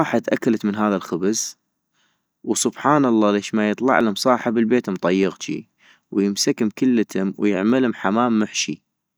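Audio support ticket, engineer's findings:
Regular clicks in the speech, about every 1.23 s from 0.31 s to 8.93 s, around seven in all. Likely clock drift buffer slips between two unsynced devices, roughly 150 ppm apart, buffer dropping or repeating a handful of samples each time.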